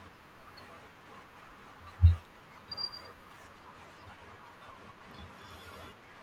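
Speech, with channel delay (comb filtering) from 3.44 s to the end. One channel runs roughly a single sample late, about 0.02 ms, so the mono sum cancels near 20 kHz, gently dulling the top rather than the hollow, phasey sound of deeper notches or plain low-pass filtering.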